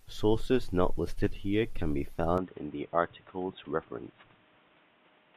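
Speech, which at 2.38 s, right after "listed here can be", turns dull and band-limited, with nothing above 3.8 kHz. There is no gap, the level drops roughly 5 dB, and a new noise floor sits around 30 dB down. The likely cause is an input switched to a poorer device.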